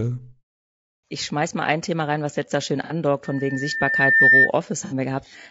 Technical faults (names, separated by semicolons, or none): low-delay AAC compression; AAC frame loss with concealment; loudspeaker feedback squeal